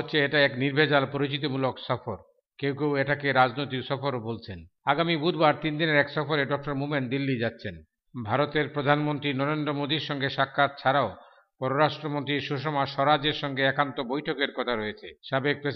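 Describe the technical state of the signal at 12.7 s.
At 12.7 s the signal is intact, with no dropout, distortion, glitch or other audible fault at that point.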